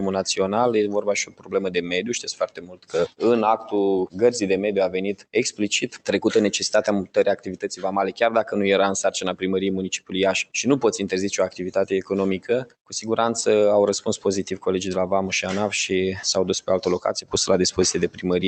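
A speech-tuned noise suppressor stays active throughout, treating sustained tones and tails as noise, so the level pumps by around 10 dB. The suppressor cuts sound hardest at 1.26–1.92, 2.41–3.22, 5.14–5.35, 5.86–6.08, 7.36–7.77, 9.97–10.13 and 12.39–12.92 s, with drops of about 15 to 17 dB that swallow held sound and decays while onsets survive.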